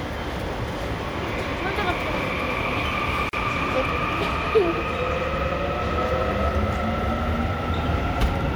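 At 3.29 to 3.33 s a gap at a join of encoded pieces opens a gap of about 40 ms into otherwise continuous sound: separately encoded segments were spliced without trimming their start delay and end padding. It sounds like a brief dropout, then resumes seamlessly; waveform and spectrogram show a narrow empty column with smeared edges.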